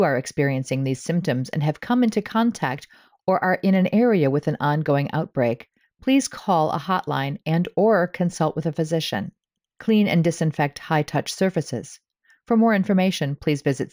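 Imaging from linear upsampling runs throughout the speech. The rate was raised from 16 kHz to 48 kHz by joining samples with straight lines, a weak filter. This dulls the top of the original band and leaves a mirror image between 8 kHz and 16 kHz, about 30 dB down, heard as a metallic shimmer on sibilants.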